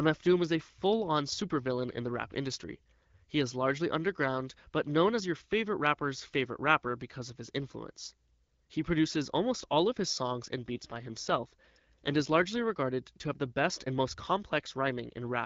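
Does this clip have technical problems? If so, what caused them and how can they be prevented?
Yes. An AMR rate drop runs from 10.75 to 12.60 s, starting right after "of his songs and" and recovering just before "regarded to have the". The AMR-WB link falls from 12.65 to 8.85 kbit/s, so fewer bits describe each frame and the speech turns rougher and more synthetic. On a spectrogram the bandwidth stays at about 7 kHz with no gap, but harmonics look smeared and noisier. The waveform stays continuous. Better radio coverage or signal strength would keep the codec at its higher rate.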